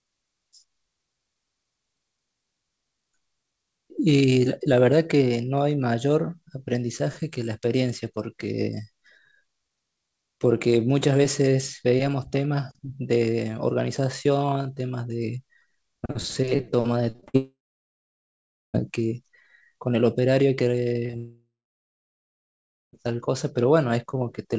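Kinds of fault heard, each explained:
Repeated packet loss (robotic sound): from 17.12 to 17.36 s, five quick gaps are each patched by repeating the preceding sound, giving a choppy stretch with pieces missing.
Long network dropout: at 17.36 to 18.76 s and 21.17 to 22.95 s the audio trails off into a fading buzz or hiss then silence, likely an interrupted network, returning without the lost part.
Short concealed packet loss: around 21.06 and 21.11 s, holes of a few hundredths of a second are filled by extending the last sound, heard as brief smears just before the second dropout.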